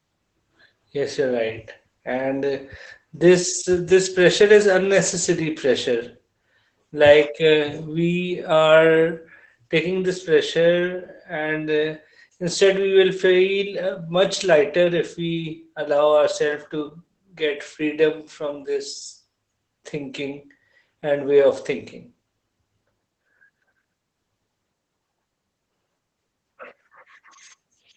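Speech runs through Opus voice compression for its full length, with plainly audible damage: the speech sounds muffled, hoarse and faintly robotic because the linear-prediction coder is rebuilding the excitation coarsely. On a spectrogram, energy stops at a hard ceiling around 8.5 kHz, the band limit of the wideband SILK mode, and harmonic detail looks smeared. Together these point to a bitrate of about 12 kbps with 20 ms frames.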